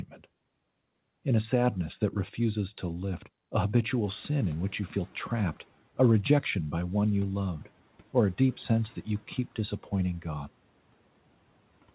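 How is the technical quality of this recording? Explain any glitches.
There is one audible glitch, a noise suppressor catching up, on a narrowband speech recording with nothing above 4 kHz, which fits a G.711 mu-law call path.

From 4.04 to 5.64 s, between "refuses to lift a" and "a rejection by one", the room noise jumps by about 16 dB at around 4 s and the suppressor's noise estimate lags. The noise first comes through with less reduction, then sinks by about 8 dB over 1.6 s as the estimate adapts.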